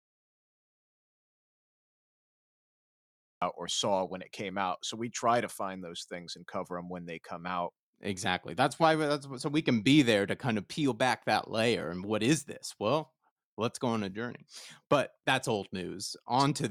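The audio input was most likely lost for a stretch, through a disconnected device, a broken link or a mute, while the recorder kept writing silence, an audio dropout to silence. It is already under way when the clip opens and lasts until 3.42 s, so the first few seconds are dead silence with no room tone at all. The speech then cuts in abruptly mid-flow at "or saw when it", with whatever came before it gone.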